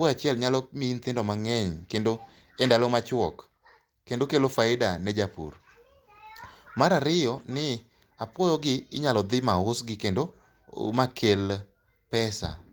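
At 10.83 to 10.85 s there is a lost packet rebuilt from error correction. A 20 ms stretch, which fits a single lost packet, was replaced by the low-bitrate copy carried in the next packet. There is no gap, but that moment of speech sounds briefly rougher and noisier.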